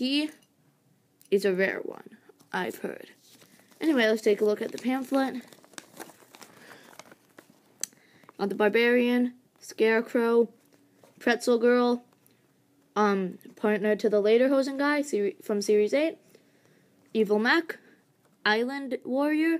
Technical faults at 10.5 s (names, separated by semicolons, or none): none